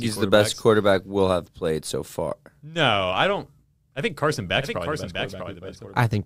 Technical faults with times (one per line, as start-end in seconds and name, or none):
4.62-6.26 doubled audio track